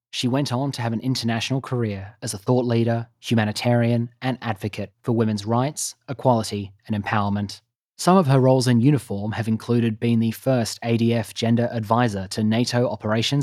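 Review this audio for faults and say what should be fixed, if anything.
Automatic gain rising, 0.56 to 2.52 s: the control lifts gain about 5 dB, so the background swells with the voice, which a talker speaking louder wouldn't cause. Set a proper input level and disable automatic gain control, or restrict how far it can move.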